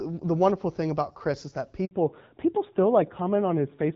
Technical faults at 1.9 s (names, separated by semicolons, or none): handover gap; fallback to narrowband